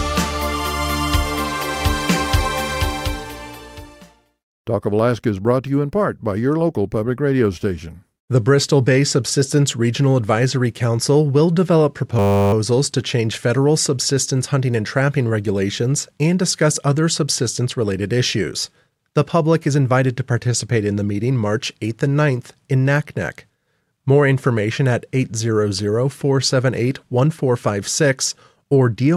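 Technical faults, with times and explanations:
12.19–12.53 s, system hang loop: the machine briefly froze while the sound hardware kept replaying its ring buffer, so one 10 ms slice repeats 34 times, giving a steady 100 Hz buzz. That short loop points to a small buffer, and little or no audio seems lost afterwards.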